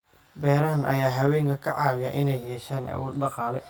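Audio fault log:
throughout, channel delay (comb filtering): one channel runs roughly 20 ms behind the other, and once the two are folded to mono, everything they share cancels at evenly spaced frequencies. The first notch sits down around 20 Hz, and the rest repeat closely up the spectrum, so the speech comes across rough and slightly doubled. Because the offset never changes, those notches stay parked in the same places the whole way through.
1.25–1.27 s, lost packet rebuilt from error correction: a single 20 ms packet went missing, but the next one carried a low-bitrate backup copy of it, which the decoder played in its place. That's why there's no dropout or silence. Instead you get a brief patch that sounds rougher and grainier than the surrounding speech, because that backup copy holds much less detail than the original frame did.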